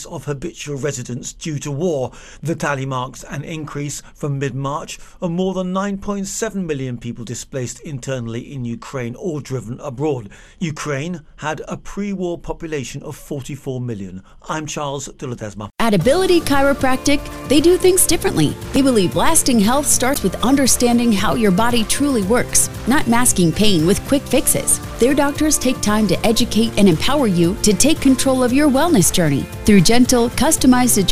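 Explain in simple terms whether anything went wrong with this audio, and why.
At 20.13 to 20.17 seconds, the sound briefly glitches and jumps ahead. The likely cause is a broken MP3 bit reservoir. Some MP3 frames were lost, and the next frame looked back for its borrowed data and found the wrong bytes.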